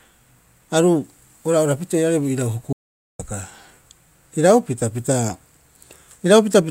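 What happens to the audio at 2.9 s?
At 2.9 s the speech is inside an audio dropout to silence. From 2.73 to 3.19 s the sound cuts off into silence, with no room tone. About 0.47 s is lost. The input was likely interrupted while recording continued, writing silence.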